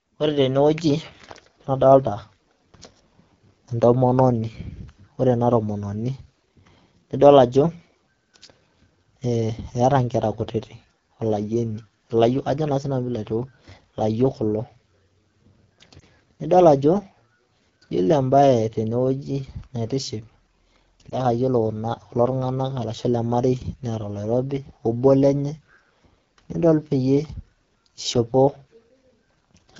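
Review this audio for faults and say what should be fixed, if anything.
Throughout the clip the speech sounds rough and raspy. This is the AMR wideband (HD Voice) codec running at one of its lowest rates. The degradation points to the 8.85 kbit/s mode. The codec models the voice up to 6.4 kHz with a pulse-excited vocal tract filter and fills 6.4 to 7 kHz with shaped noise, and at this rate too few bits describe the excitation. Running the link at 12.65 kbit/s or higher would prevent this.

At 15.99 to 16.03 s and again at 21.09 to 21.19 s there is a brief dip or warble, each a momentary wobble rather than a gap, after which the voice returns weak or rough for an instant. These are lost AMR speech frames, one 20 ms frame at each point. The frame failed its checksum after a radio error, so the decoder repeated the last good pitch and vocal tract settings at reduced gain to conceal it. Improving radio conditions or adding stronger channel protection would prevent this.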